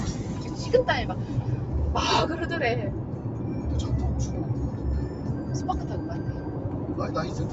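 From start to finish the everyday sounds pump and thin out. Sharp onsets come through, but anything sustained, along with the ambience and decay behind it, sags by roughly 5 dB and then swells back, so the level breathes unevenly. This is a noise suppressor applied to music or sounds: processing built for speech treats steady, non-speech energy as background noise and pulls it down. The band stops near 8 kHz, the ordinary limit of this call path.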